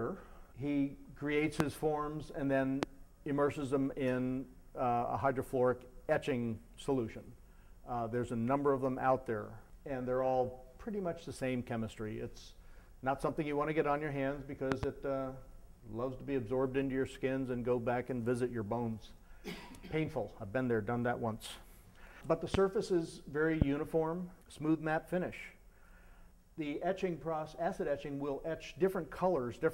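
Sharp loud pops cut in at 1.60 s, 2.83 s, 22.54 s and 23.62 s, with a double pop from 14.72 to 14.86 s, each far louder than the sound, which carries on underneath. Each is likely a voltage spike from a plug, switch or static.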